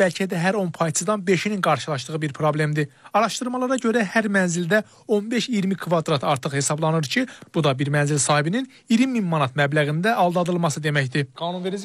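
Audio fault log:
Nothing to log here, since nothing in this audio stands out as a technical problem.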